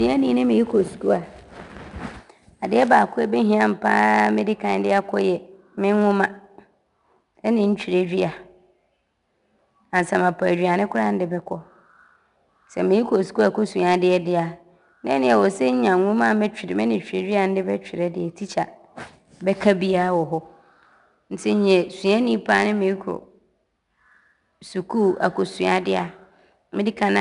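Speech recording carrying 4-bit ADPCM compression for its full length. Each loud syllable has a gritty hiss riding on it, with roughness on sharp onsets where the adaptive step lags. Nothing reaches above 10.7 kHz, which fits a sample rate near 22 kHz and a bitrate around 89 kbps.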